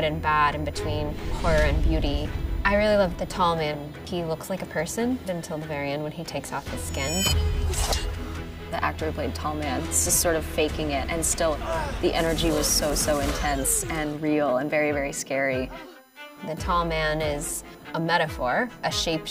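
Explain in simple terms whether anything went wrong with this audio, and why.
A faint USB whine runs through the whole recording: a steady high pitch set by the 1 kHz USB frame rate, strongest at 17 kHz, unlike the low buzz of mains hum.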